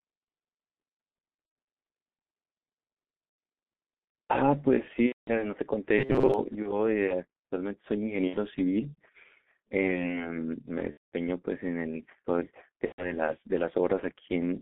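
Throughout, the speech carries G.723.1 codec damage: at about 6.3 kbit/s the band is held to roughly 200 Hz to 3.6 kHz, and the slow-updating voice model leaves it muffled and hoarse, with smeared consonants.

VoIP packet loss concealed by the speech codec first appears at 1.46–1.55 s and again at 5.06–5.32 s. The decoder extrapolates from its last pitch and filter, so the sound stretches into a fading buzzy tone or coloured noise, and the speech stays weak briefly after the gap.

At 5.99–6.34 s there is robotic sound from repeated short buffers. A rigid metallic buzz near 133 Hz runs through the speech. This fits a buffer of about 7.5 ms being replayed for around half the span, likely because audio arrived too late.

Further concealed losses follow at 6.62–6.78, 8.28–8.37, 10.91–11.10 and 12.86–13.16 s. The longer ones suggest several 30 ms frames dropped, and those gaps fade and then fall silent.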